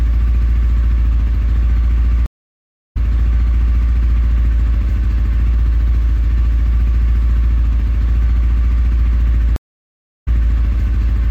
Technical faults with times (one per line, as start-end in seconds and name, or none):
2.26-3.89 stream reconnect
9.56-10.58 stream reconnect